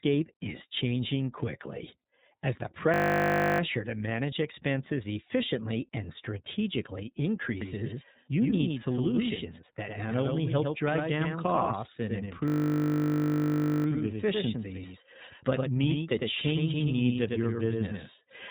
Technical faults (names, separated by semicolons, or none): iLBC codec; system hang loop; doubled audio track